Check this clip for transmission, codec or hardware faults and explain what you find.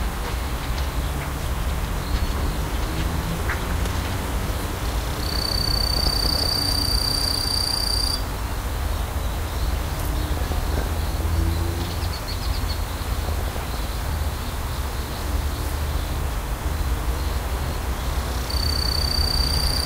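There is one transmission fault: DAB burbling, at 5.97 to 6.58 s, 10.29 to 11.29 s and 12.88 to 13.88 s. Weak reception lets bit errors of around 0.5 to 1 percent slip through error correction. Corrupted samples put short noise blips in single sub-bands, and corrupted scale factors make sub-bands jump in level for up to a frame, giving brief noisy blips and sudden level jumps in narrow bands.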